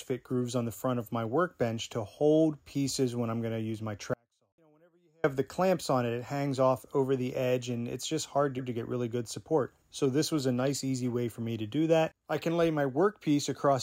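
At 4.14 s the sound cuts out abruptly and stays gone until 5.24 s, about 1.1 s later. This is an audio dropout to a faint residue. In the gap only a faint trace of the signal remains, roughly 40 dB below its normal level. The likely cause is a brief loss of the wanted signal while the path after the break stayed live. On a waveform the envelope collapses to a thin sliver with vertical edges at both ends. A spectrogram shows a sharp-sided column of near-empty energy, unlike a pause or a fade.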